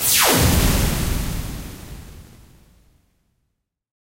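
From 1.81 to 2.55 s, processor overload crackle tears through the sound: buffers missed one after another, each replaced by a hard-edged scrap of old audio. The gritty, rapid texture fits around twenty missed buffers of roughly 10 ms, unlike a single isolated dropout.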